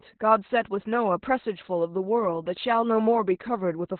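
Speech clip with heavy Opus voice compression throughout: nothing is present above about 4.3 kHz, so the voice sounds muffled and telephone-narrow, and coarse excitation coding in the SILK coder makes it hoarse and slightly robotic, which fits a low bitrate around 8 kbps.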